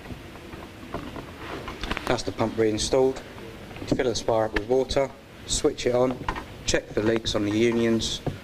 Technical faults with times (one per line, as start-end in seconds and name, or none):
1.97-2.09 loud pop
7.16-7.18 loud pop